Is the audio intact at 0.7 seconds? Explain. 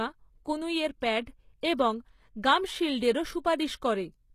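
No. At 0.7 seconds, as across the whole recording, the speech likely passed through HE-AAC compression at a very low rate, consistent with roughly 20 kbps. The encoder keeps only the lower spectrum and synthesises the treble by copying lower bands upward under a coarse envelope, so the upper harmonics don't match the real ones. The damage is plainly audible: s sounds come out gritty and metallic, and nothing remains above about 14.9 kHz.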